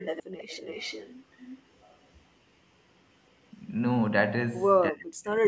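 A speech recording carries an echo leak from 0.02 to 1.13 s and again from 1.32 to 1.61 s. A faint copy of the speech trails it by 325 ms. It sits about 15 dB down at first, then about 20 dB down. The likely cause is a far-end echo canceller letting loudspeaker pickup return. From 4.9 to 5.44 s the speech drops sharply, by roughly 40 dB at its deepest, across about half a second. This fits speech suppressed in double talk, likely from the canceller ducking both talkers at once. Nothing sits above 8 kHz, consistent with the call's microphone processing.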